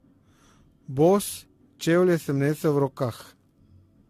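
Generation loss runs through the whole speech clip. The sound is swirly and hollow, with smeared consonant attacks and nothing above 14 kHz, more degraded than a single lossy encode at this quality would leave it. The likely cause is repeated lossy re-encoding, which points to an AAC-LC chain at around 64 kbit/s applied around seven times. Each pass requantises on a shifted frame grid, so the noise and spectral holes build up with every generation.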